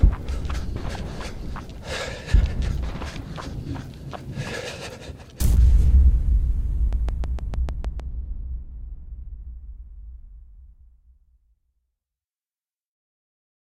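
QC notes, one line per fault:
6.93–8.01 s, train of clicks: a run of about seven near-identical clicks at a steady 6.5 per second sits on top of the sound, peaking around 5 dB above it, so they poke out as a crisp, evenly paced ticking rather than blending in. The matching shape and even spacing point to a repeating pulse from outside the audio itself, likely interference from nearby equipment or a faulty connection or power supply.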